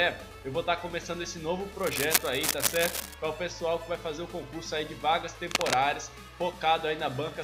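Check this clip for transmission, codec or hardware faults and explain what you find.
Cable scratch noise appears twice, from 1.79 to 3.14 s and from 5.51 to 5.74 s, as dense, ragged scratching at roughly the level of the sound itself. A worn cable or connector being moved likely caused it by making contact resistance jump erratically. A spectrogram would show broadband speckled smears, and a waveform would show spiky, irregular bursts.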